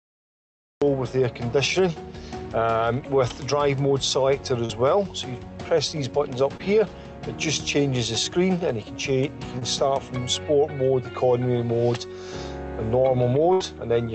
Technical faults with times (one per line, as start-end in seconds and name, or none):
0.00-0.82 cut-off start
4.65-4.71 short concealed packet loss
6.57-6.61 short concealed packet loss
9.59-9.63 short concealed packet loss
13.53-13.62 burst of packet loss